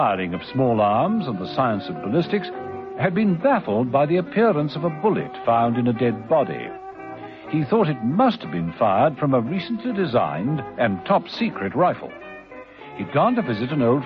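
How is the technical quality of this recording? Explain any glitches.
No technical faults are audible.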